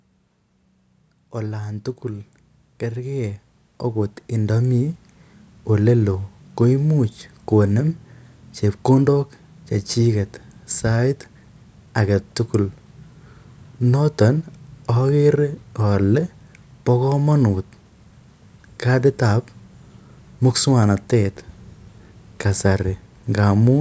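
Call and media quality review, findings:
Automatic gain rising, 1.32–5.07 s. AGC judged the mic input too quiet and ramped its gain up by about 12 dB over roughly 3.7 s. Speech and background noise swell together, no sudden step, level climbing steadily until 5.07 s. Call microphone processing active throughout; high-pass trims lowest bass, content stops near 8 kHz, expected, not a fault.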